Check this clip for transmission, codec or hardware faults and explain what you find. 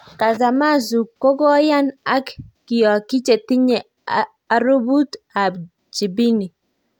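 No faults can be heard anywhere in this speech.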